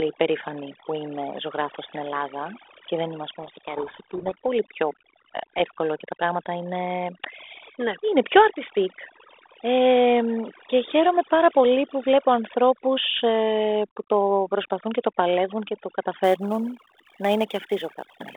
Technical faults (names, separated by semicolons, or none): overdone noise removal; codec payload misread; sample clock jitter